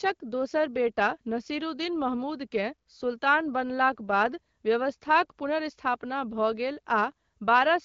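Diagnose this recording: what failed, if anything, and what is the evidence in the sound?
Nothing failed in this recording.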